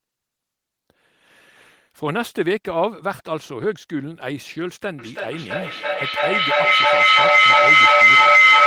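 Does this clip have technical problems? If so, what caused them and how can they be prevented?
Yes. Feedback howl starts at 4.99 s and continues to the end: a loop between microphone and loudspeaker gains level on each pass, repeating roughly every 0.3 s and narrowing to a tone near 2 kHz that peaks about 12 dB above the speech. Preventing it means keeping devices in one room off the same call, or muting all but one.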